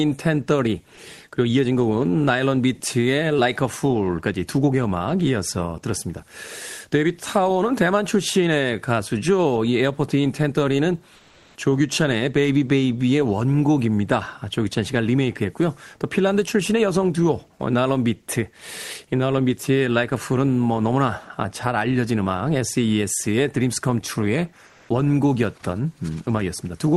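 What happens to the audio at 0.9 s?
Nothing goes wrong at 0.9 s: the speech there is intact, carrying only the ordinary character of the WebRTC call path it travelled through.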